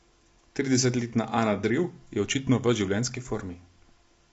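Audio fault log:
Throughout: low-delay AAC compression. The speech sounds rough and grainy. Noise fills the gaps between the pitch harmonics. Nothing is heard above about 7.7 kHz, so the top band is cut away. The damage is plainly audible. The likely cause is AAC-ELD, the low-delay codec used for video calls. Its short frames resolve harmonics poorly and use bits less efficiently. The degree of damage fits a low bitrate, around 24 kbps.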